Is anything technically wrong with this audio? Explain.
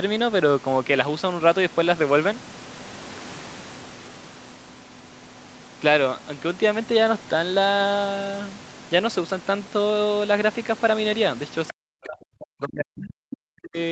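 Yes. From 11.7 to 13.77 s the speech collapses, around 40 dB down at worst. This is likely speech suppressed in double talk, where the echo canceller muted the talker along with the far-end echo.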